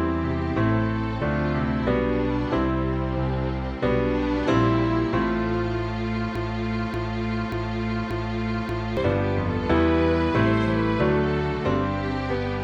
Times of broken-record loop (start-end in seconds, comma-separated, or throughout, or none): 6.36-8.97